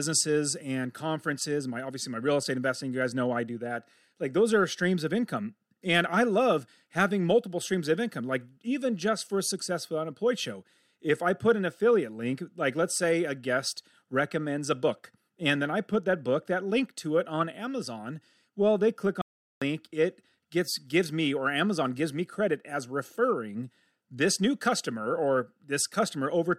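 A speech recording with one playback stall: at 19.22 s the audio just drops out mid-flow and stays silent for about 400 ms, picking up again at 19.62 s. That's most likely the player running dry of data or its thread getting blocked briefly.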